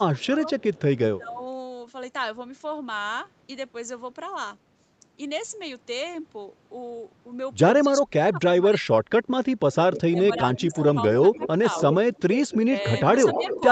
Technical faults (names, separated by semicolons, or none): speech suppressed in double talk; echo leak